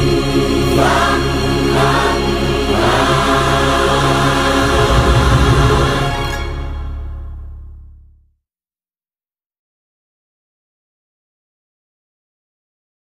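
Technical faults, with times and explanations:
Nothing technical stands out here; the audio holds together nicely the whole way, with no glitches or dropouts to point at.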